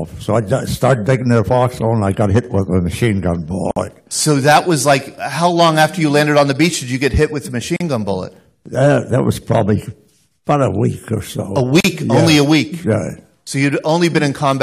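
At 3.71 s the sound drops out for about 53 ms, then again at 7.76 s and 11.80 s for about 40 ms each, roughly every 4 seconds. That's a gap at a join of encoded pieces: the audio was encoded in 4-second chunks and stitched back together without trimming each run's start-up delay and end padding. You hear short holes with smeared edges, and the sound picks up right where it left off.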